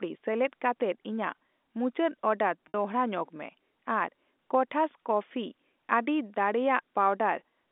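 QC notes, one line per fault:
2.68–2.74 s, packet loss with pitch repetition: after "ᱠᱟᱛᱮᱫ ᱤᱧᱟᱜ ᱢᱩᱪᱟᱹᱰ ᱚᱰᱟᱨ", 60 ms vanish, likely three 20 ms packets. The repeated pitch period gives a brief buzzy hold before "ᱧᱚᱜᱢᱮ ᱟᱨ ᱠᱚᱴᱷᱟᱥ ᱠᱚᱯᱯᱷᱤᱤ".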